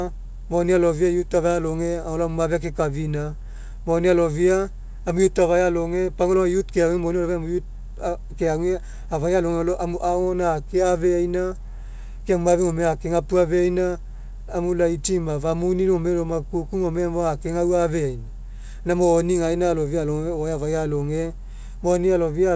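No technical faults can be heard anywhere in this speech clip. The audio has come through a WebRTC call path that is working as intended, and it stops at 8 kHz with no content above it, which fits a wideband codec such as G.722 at around 64 kbps.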